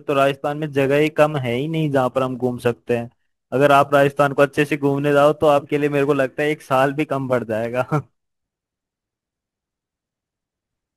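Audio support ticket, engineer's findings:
Sample clock jitter throughout the speech. Hiss-like roughness rides on loud and high-frequency sounds and drops out in pauses, so it is not a fixed noise floor. Probable unstable converter clock with about 10 µs of timing scatter, producing error roughly 30 dB below the signal.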